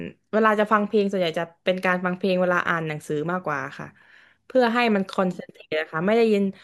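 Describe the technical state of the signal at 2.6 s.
At 2.6 s the speech signal is intact, with no audible technical fault at that moment.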